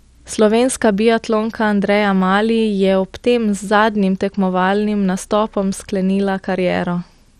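Throughout the speech, dull, gurgling granular distortion, likely MP2 compression fitting about 64 kbps; a spectrogram shows upper sub-bands flickering and nothing above 14.3 kHz.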